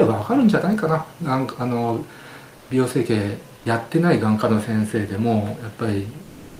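At 2.59 s, for about 80 ms, and again from 6.23 s to the end, the real background gives way to comfort noise: a flat, featureless hiss, likely from discontinuous transmission filling pauses at the receiver. The first patch matches the level; the second sits about 2 dB off.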